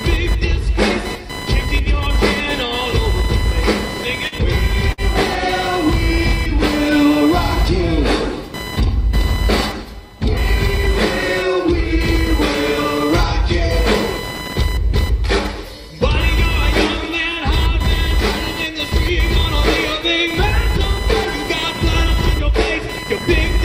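Throughout the clip, computer activity noise is present. Shifts in load from the processor, graphics card or mouse disturb the ground shared with the audio circuit, and that disturbance is added to the recording. It comes through as a buzzing, chirping texture pulsing at around 1 kHz, fairly prominent at roughly 10 dB below the sound itself. It rises and falls with what the computer is doing rather than following the audio.

Between 4.27 and 4.45 s there is a short stall from a late packet. One packet did not arrive on time, so the jitter buffer ran dry and the receiver had nothing new to play. It bridged the gap by stretching the last sound for about 45 ms, then resumed from the same point once the packet turned up, leaving playback running 45 ms later than before. Almost nothing is lost, but one moment is held unnaturally long, with a faint buzz or dip.

From 4.92 to 5.01 s comes a burst of packet loss. 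A run of audio never reached the receiver in time to be played. The receiver concealed the hole by continuing the last sound for about 57 ms, fading it as it went, so it turns into a held buzz or a dying hiss. Playback then picks up again further along, with roughly 60 ms of the original audio simply gone.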